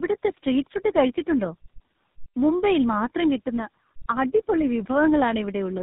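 Throughout the speech, tandem speech coding is audible: three low-bitrate codecs in a row, ending in GSM full rate, leave it rough, warbly and muffled, with nothing above 3.8 kHz.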